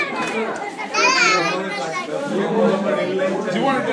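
Wrong sample rate from 1.39 s to the end: the audio slows to 0.919 speed and drops 1.47 semitones, which fits 24 kHz material played at 22 kHz.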